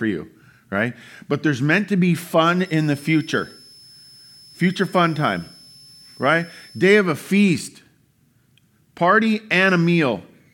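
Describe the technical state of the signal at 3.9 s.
At 3.9 s the speech carries a switching supply whistle, running from 2.65 s (after "meant to be fun") to 6.99 s (before "a feast"). A power supply's switching frequency has fallen into the audible band, giving a high tone between 5.2 and 5.33 kHz, around 30 dB below the speech.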